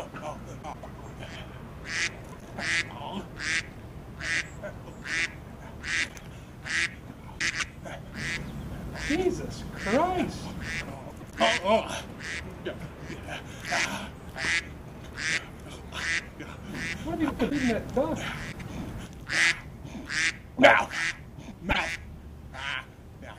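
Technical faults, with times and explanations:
0.62–0.86, 2.24–2.42, 6.08–6.21, 7.39–7.62, 11.10–11.33, 17.29–17.52, 18.52–18.70 and 21.70–21.78 s, frames out of order. In each stretch, two adjacent runs of frames swap places. The later half plays before the earlier half. This gives a brief garbled flutter. The swapped runs last from about 26 ms to about 105 ms each. No audio goes missing; it is only reordered.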